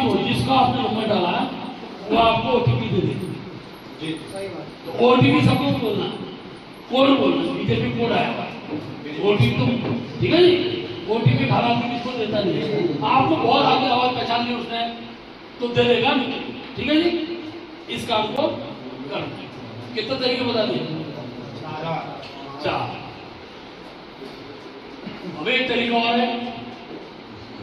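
At 18.36 s, a block of digital silence about 12 ms long, fitting a 512-sample buffer left unfilled, gives a hard-edged tick, unlike a faded dropout.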